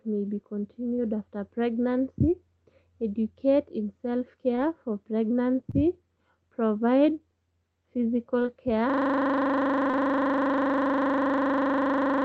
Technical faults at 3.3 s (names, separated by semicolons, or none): none